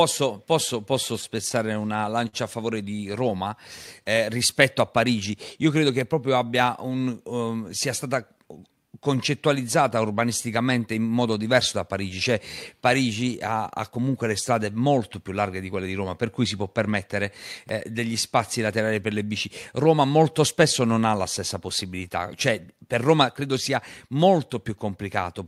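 From 1.21 to 3.33 s there are scattered short gaps: around ten packets went missing or arrived too late, and the receiver covered each hole by stretching the sound that came just before it. The patches add up to roughly 150 ms, and none is longer than about 50 ms. The result is a string of small ticks and smeared hiccups spread across two seconds of otherwise clear speech. That spread marks it as isolated packet loss rather than one continuous dropout, which would leave a single longer hole.

Two jitter buffer speed-ups follow. The first runs from 16.78 to 17.08 s at 111% speed and removes around 40 ms. The second runs from 21.94 to 22.19 s at 114% and removes about 50 ms. In each case the receiver had more audio queued than it wanted, so it cut out tiny pitch-period slices to drain the backlog. The speech briefly sounds hurried but keeps its normal pitch. The unchanged pitch separates this from a playback-rate or resampling error, which would raise the pitch along with the tempo.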